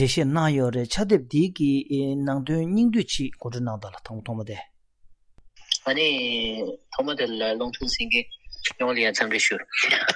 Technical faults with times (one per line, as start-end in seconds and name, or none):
none